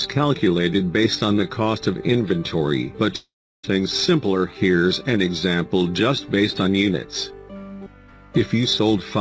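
Around 3.16 to 3.65 s the audio breaks up in a way that sounds like a long network dropout, likely packets that never arrived. The last bit of sound gets stretched into a fading buzz, then there's about 0.34 s of near silence before things resume, with roughly half a second of material simply gone. The whole clip also tops out at 8 kHz, which fits a wideband call codec such as G.722.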